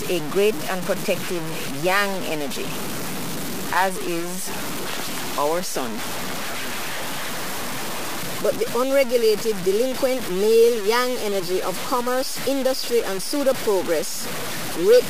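From start to finish the sound carries distortion that tracks the signal, with the error only about 10 dB below it. The likely cause is low bit depth without dither: the samples were truncated onto a coarse grid, consistent with a 4-bit word, so the rounding error moves with the sound itself. On a waveform the trace looks stair-stepped, and on a spectrogram a broad noise floor rises and falls along with the signal's level.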